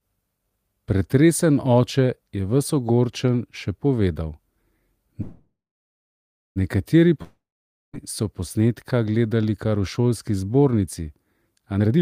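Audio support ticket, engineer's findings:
Call audio freeze, 5.21 to 6.58 s: fading buzz, then about 1 s of silence; audio resumes exactly where it stopped, nothing lost, latency up 1.34 s. Jitter buffer underrun, likely from held packets.

Long network dropout, 7.22 to 7.95 s: same fading fill, then about 0.5 s of silence, but audio returns 0.72 s further on, so content is missing. Likely packet loss.

Jitter buffer speed-up, 11.78 to 11.98 s: sound runs at 172% speed with unchanged pitch, about 0.15 s trimmed. Receiver dropping pitch periods to shrink an overfull buffer, not resampling.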